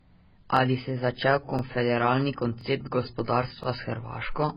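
Throughout the speech, nothing is present above 5.1 kHz, and what remains sounds dull and smeared, with a watery, warbling texture. This is likely heavy AAC compression at a very low bitrate, around 12 kbps. A plain low-pass filter would only dull the sound, without the coding artefacts.

The overlapping chunks come at 0.57, 1.59, 2.61 and 3.64 s. Each chunk boundary replays the last 23 ms before moving on, producing a short stutter that repeats every 1.0 s. Unlike a dropout, no sound goes missing. A sliver is doubled instead.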